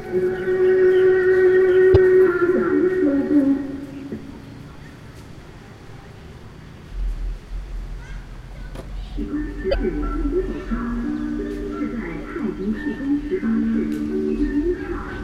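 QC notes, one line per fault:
1.90–1.97 s and 9.68–9.75 s, damaged data in a compressed stream: each is a 70 ms chirp or blip. Corrupted bytes make the decoder misread those frames and lose sync until it finds the next valid frame header, producing garbled sound.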